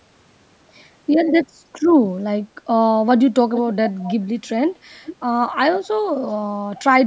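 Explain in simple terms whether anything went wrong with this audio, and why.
Something did go wrong: there is an echo leak. From 3.55 to 4.25 s, a fainter copy of the speech comes back about 0.43 s behind the original, and a shorter scrap of it returns at 5.05 s. It most likely comes from the far end playing the call on a loudspeaker, where the echo canceller failed to remove everything its microphone picked up and sent part of it back.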